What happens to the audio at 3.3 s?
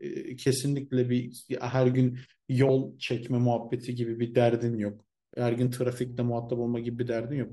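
Nothing goes wrong at 3.3 s: the speech continues intact through that moment, with no dropout, click, distortion or other fault to be heard.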